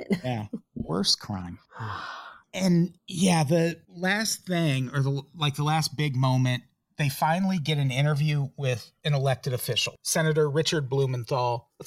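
Channels drifting apart runs through the whole clip, from start to finish. The two channels appear to come from devices on separate clocks, with a mismatch of around 200 ppm, so the delay between them grows steadily until it reaches about 2 ms by the end. When the channels are summed to mono, the comb-filter notches from that offset sweep slowly through the spectrum, and the speech takes on a gradual flanging, hollow swirl.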